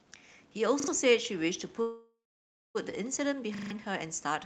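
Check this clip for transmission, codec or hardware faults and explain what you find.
Two kinds of fault turn up in this speech: a repeated buffer that stutters twice and a call audio freeze in the middle.

Repeated buffer, at 0.80 to 0.88 s and 3.55 to 3.71 s. New audio arrived late, so the device replayed its last chunk, which fits a 40 ms buffer. You hear a hard-edged stutter: two extra plays the first time and four the second, losing around 70 ms and 150 ms.

Call audio freeze, from 1.81 to 2.77 s. The sound stretches into a fading buzz and then sits silent for about 0.56 s before resuming right where it left off. Nothing is missing, but everything after it runs about 0.94 s late. The likely cause is held-up packets draining the jitter buffer.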